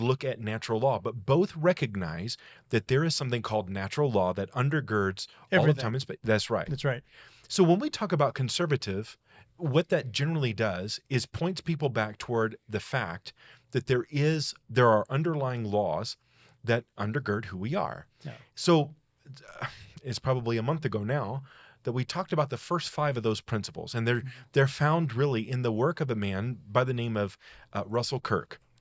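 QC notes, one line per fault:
No faults heard.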